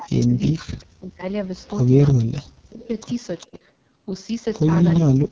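Throughout, the AMR wideband (HD Voice) codec runs at its lowest 6.6 kbit/s rate, so its crude vocal tract model leaves the speech rough and raspy.

From 0.0 to 1.25 s, the likely cause is speech suppressed in double talk: the echo canceller, confused by simultaneous talkers, pulls the voice down deeply, around 40 dB, so it fades and breaks away. What is likely the same suppression returns from 2.58 to 2.95 s and again takes the voice down hard.

At 3.4 s there is likely an echo leak: part of the loudspeaker pickup escaped cancellation and returns 400 ms late as a faint scrap, roughly 30 dB below the speech. Overlapping it, from 3.45 to 3.61 s, a shallower, likely double-talk dip of about 20 dB briefly lowers the voice.

From 5.02 s to the end, likely double-talk suppression again drops the speech by around 40 dB, cutting it away. The call's high-pass filtering and the band ending at 8 kHz are normal processing.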